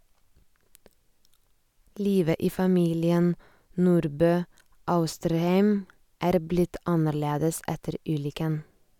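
No technical faults can be heard in this recording.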